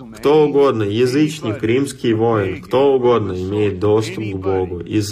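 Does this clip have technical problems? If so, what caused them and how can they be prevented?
Yes. From 1.67 s to the end, the adaptive stream switches to a lower bitrate. The sudden, gapless loss of treble and the added codec artefacts point to a low-bitrate HE-AAC rendition. On a spectrogram, everything above 14.9 kHz abruptly disappears at 1.67 s, while the waveform shows no gap. To prevent this, buffer more before playback or cap the lowest rendition the player may choose on a slow connection.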